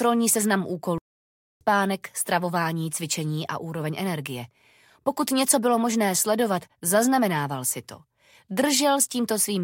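At 0.98 s the sound cuts out in mid-flow and the output stays silent until 1.61 s, a gap of about 0.63 s, after which playback resumes. This is a playback stall. The likely cause is the player running out of buffered data or its playback thread being blocked, so nothing was delivered to the output until it recovered. There is no fade at the break, just an abrupt silence.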